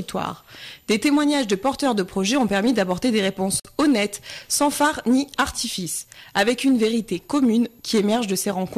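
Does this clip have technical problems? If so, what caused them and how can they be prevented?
Yes. At 3.60 s the sound drops out for about 49 ms, ending at 3.65 s, then resumes exactly where it stopped, with softened edges on the silence. This is a gap at a join of encoded pieces: two separately encoded segments were spliced without removing the encoder's start-up delay and end-of-stream padding, so that dead time remains between them. Prevent it by encoding the material as one continuous stream, or by trimming the encoder delay and padding using gapless metadata before joining.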